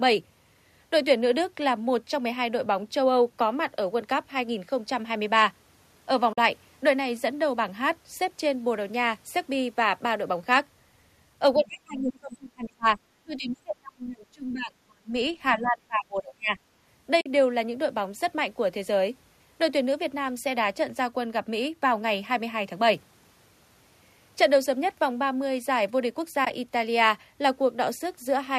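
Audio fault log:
6.33–6.38 s, 17.21–17.26 s and 26.45–26.53 s: AAC frame loss with muting. Short soft-edged holes, where the decoder zeroed the missing spectrum and the overlapping windows faded the sound out and back in. The first two are solid 50 ms gaps, which fits five lost 10 ms frames. The last loses 40 ms scattered over 80 ms, in runs of up to about 20 ms.
11.55–12.98 s, 13.23–15.13 s and 15.52–16.58 s: speech suppressed in double talk. The talker's speech is pushed down by as much as 30 to 35 dB in pieces across these stretches. This is likely an echo canceller that could not separate near-end talk from loudspeaker echo while both sides spoke, so it attenuated everything.
15.66–15.70 s: other side's voice leaking through. A brief scrap of a second voice, about 30 dB below the talker, slips past the echo canceller inside the third suppression stretch. It is likely residual loudspeaker echo that was not fully removed from the microphone signal.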